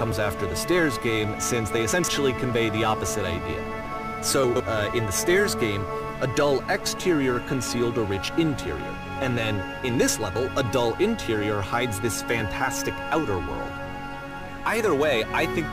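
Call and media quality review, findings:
Chunks out of order, 1.92–2.08 s and 4.44–4.60 s: brief jumbled stutter. One 40 ms chunk plays three chunks late, leaving three hard joins per event. Waveform shows step discontinuities; spectrogram shows vertical broadband lines and displaced fragments. Probable jitter-buffer or playout reordering fault.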